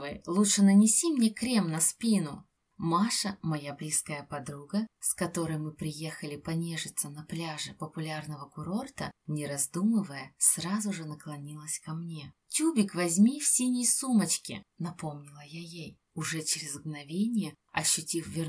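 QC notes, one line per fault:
No faults to note.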